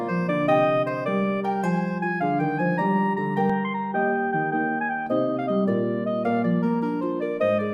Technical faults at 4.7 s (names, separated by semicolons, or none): input switched to a poorer device